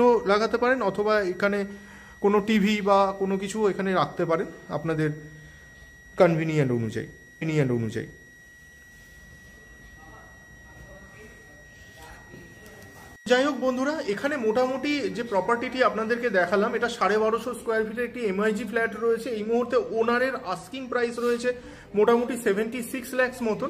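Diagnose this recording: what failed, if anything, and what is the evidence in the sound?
Switching supply whistle, from the start to 16.9 s. A thin high tone sits around 2 kHz, wandering slightly between about 1.90 and 1.93 kHz, roughly 25 dB below the programme. This is an analogue-stage fault: a switch-mode power supply has dropped into an audible burst frequency, and its ripple is coupling into the signal path through shared ground or supply lines. The small pitch drift follows changes in the supply's load. The whistle stops at 16.9 s.

Stream segment repeated, at 7.41 to 8.41 s. About one second of the programme plays a second time, with a small blip at the point where playback jumps back, adding roughly 1.0 s to the running time. This is a playback or network-buffer fault: the player fetched or queued the same segment twice and rendered both copies back to back. The whistle continues through the repeat.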